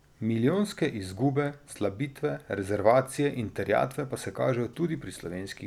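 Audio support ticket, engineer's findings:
No audible faults found.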